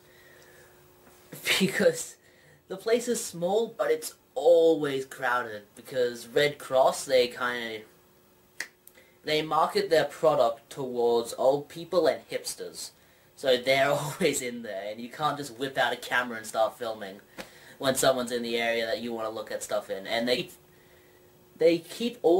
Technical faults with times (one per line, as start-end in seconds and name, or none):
1.58-1.60 chunks out of order
3.79-3.82 compressed frames skipped
20.37-20.40 compressed frames skipped